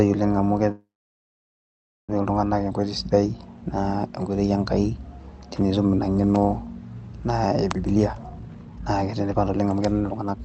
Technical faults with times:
0.71-2.10 call audio freeze
7.72-10.44 jitter buffer speed-up

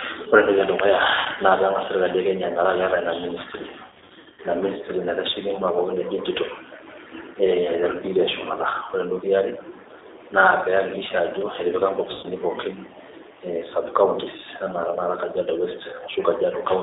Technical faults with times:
0.00-16.83 G.729 codec
1.19-1.28 VoIP packet loss concealed by the speech codec
3.86-4.40 VoIP packet loss concealed by the speech codec
12.13-12.26 VoIP packet loss concealed by the speech codec

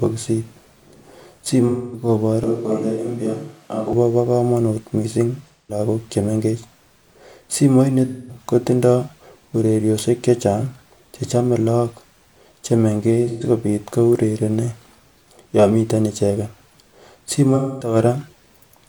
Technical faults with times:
1.67-2.08 AAC frame loss with concealment
2.44-3.93 switch to a distant microphone
5.48-5.79 AAC frame loss with concealment
8.07-8.39 AAC frame loss with concealment
13.28-13.44 AAC frame loss with concealment
17.55-17.95 AAC frame loss with concealment

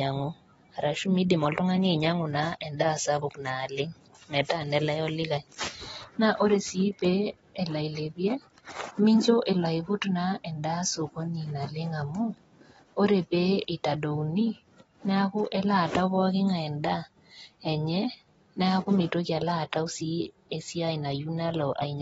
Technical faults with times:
0.00-22.02 AAC compression

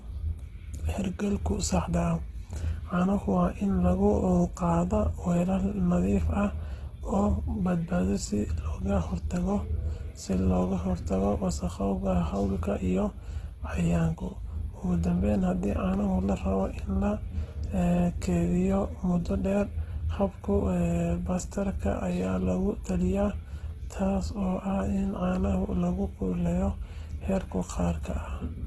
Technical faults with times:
0.00-28.67 Opus compression

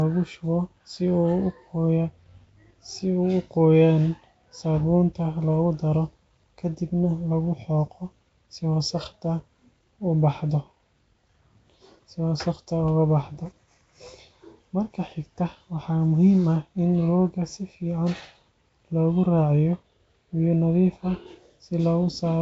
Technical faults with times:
0.00-22.42 Nellymoser compression

